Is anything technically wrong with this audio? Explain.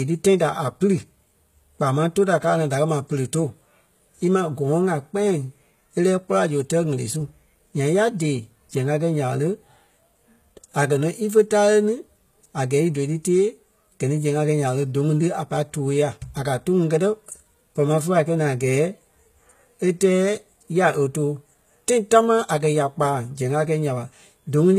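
Yes. Throughout the speech, the audio has likely passed through HE-AAC compression at a very low rate, which fits a bitrate around 20 kbps. The encoder keeps only the lower spectrum and synthesises the treble by copying lower bands upward under a coarse envelope, with nothing present above 14.9 kHz. Because that treble is rebuilt rather than original, its harmonics fail to align across the crossover, so s sounds come out gritty, metallic or lispy, and the codec damage is plainly audible.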